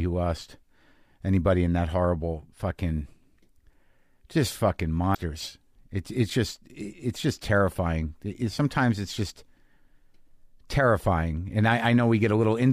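Right around 5.11 to 5.17 s there's a brief glitch in the speech, and that's damaged data in a compressed stream. A short stretch of the encoded data got corrupted, so the decoder couldn't make sense of those frames, lost its place and hunted forward for the next clean frame header before picking up again. What you hear is a roughly 60 ms disturbance in the speech.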